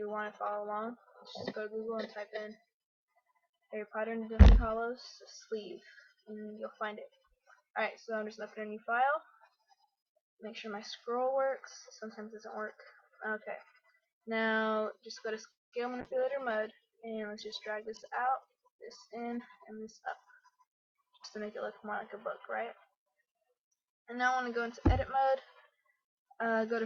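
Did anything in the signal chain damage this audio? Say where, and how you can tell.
Yes. The damage is in the call path: network delivery, the receiver's jitter buffer and the codec.

From 15.51 to 15.74 s the audio stops. A brief continuation of the last sound trails into about 200 ms of silence, and then the audio resumes where it left off with nothing lost. That pattern is a call audio freeze, likely caused by packets held up in the network until the jitter buffer ran empty. Concealed packet loss smears over a hole and throws audio away. This instead inserts a gap and delays everything after it by about 210 ms.

Just afterwards there is short concealed packet loss, two brief smears at 15.90–15.93 s and 15.97–16.00 s. In each, about 20 ms of audio never arrived and the decoder papered over it by extending the previous sound before blending back. Unlike the freeze, these last only a few hundredths of a second, leave no silence and do not push the timeline back. 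The audio under them is simply replaced.

From 16.01 to 23.80 s the call bitrate drops from 64 to 17 kbps and stays at the bottom for about 5.7 s. The sound turns coarse and dull because the encoder has to quantise more roughly and discard the upper frequencies at that rate. It is a codec-stage change driven by the bandwidth estimate, not a network gap. Nothing goes missing or stalls, and the quality loss persists until the rate climbs back.

Between 17.69 and 21.11 s a jitter buffer speed-up makes the audio run at about 106% of normal speed with its pitch unchanged. The receiver was trimming the backlog built up by the earlier delay, cutting out short pitch-period-sized pieces until about a fifth of a second had been removed. Keeping the pitch steady separates it from a clock or sample-rate mismatch, which would shift pitch and tempo together.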